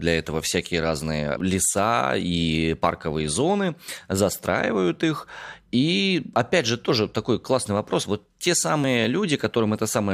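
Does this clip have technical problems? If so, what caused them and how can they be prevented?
Yes. There is audio missing between chunks at 1.40, 3.88, 6.36 and 8.84 s: between "для этого всякие разные" and "леса и парковые зоны", between "леса и парковые зоны" and "застраивают их", and just before "же тоже такой классный". Each is a brief skip of around 20 ms, and the two sides butt together with no gap. The steady 2.5 s spacing likely comes from the recorder dropping a sliver of audio each time it closes one block and opens the next. This can be prevented by buffering continuously or overlapping the blocks so that no samples fall between them.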